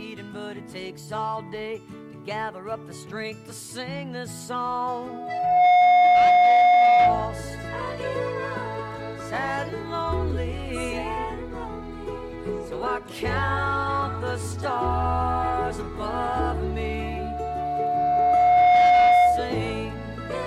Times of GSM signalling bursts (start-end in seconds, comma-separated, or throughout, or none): none